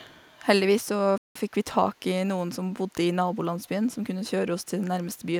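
At 1.18 s the speech cuts out for about 180 ms, until 1.36 s, then resumes. This is a playback stall. The player likely ran short of data or was blocked, so the output fell silent mid-flow.

Three brief echo leaks follow, at 1.96 to 2.00 s, 2.73 to 2.94 s, and 3.65 to 3.69 s. Each is a faint copy of the speech trailing it by 277 ms, far below the main signal. An echo canceller likely let loudspeaker sound back through the microphone.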